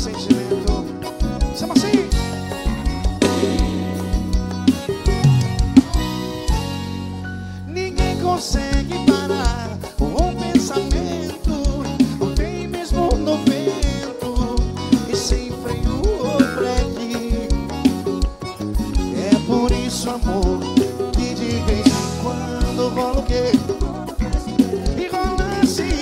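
At 23.12 s the pace suddenly picks up and stays that way to the end, running about 1.4 times faster while the pitch doesn't budge. That's a time-stretched section, likely from software squeezing the last stretch to fit a set length by cutting out short slices of audio and butting the rest together. You can hear it as a rushed quality.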